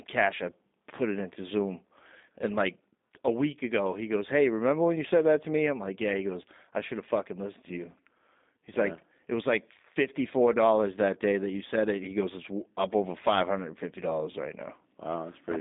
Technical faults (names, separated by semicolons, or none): G.729 codec